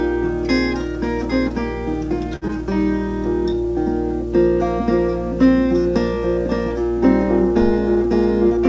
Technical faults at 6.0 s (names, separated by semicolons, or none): none